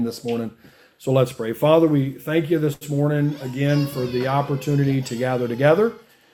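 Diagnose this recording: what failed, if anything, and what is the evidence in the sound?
At the network stage, a late packet left the jitter buffer empty, producing a short stall from a late packet at 2.73 to 2.83 s. The receiver stretched the last sound for about 79 ms, a held sustain with a slight buzz or dip, then resumed with nothing lost, now 79 ms later.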